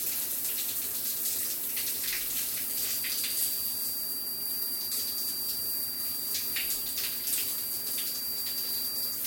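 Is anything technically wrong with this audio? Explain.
Yes. From 2.58 s to the end, a feedback whistle sits near 4.7 kHz, about 10 dB below the sound. The likely cause is a loudspeaker-to-microphone loop held right at its threshold. Unlike runaway howl, it never builds, and unlike a fixed electrical tone, its level swells and fades slowly.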